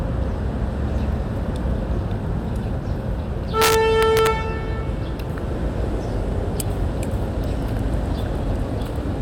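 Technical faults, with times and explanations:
3.62 to 4.27 s, integer overflow: the signal ran about 2 dB past the integer limit and wrapped to the opposite sign instead of holding, so loud peaks snap into harsh cracks.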